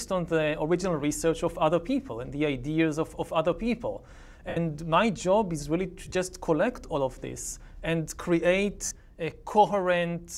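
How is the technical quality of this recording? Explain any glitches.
The main problem is three short dropouts where lost LE Audio frames break the sound. The lossy compression underneath is light.

The lost LE Audio frames hit at 4.49 to 4.57 s, 6.06 to 6.15 s and 8.85 to 8.91 s. The 4.49 s gap runs about 75 ms, which fits ten 7.5 ms frames in a row. The last one is about 52 ms. The 6.06 s one is scattered across roughly 90 ms in bits of around 20 ms at most. Each time the LC3 decoder patches the hole by replaying the last spectrum with randomised signs, so tones smear into a brief noisy wash instead of cutting out cleanly.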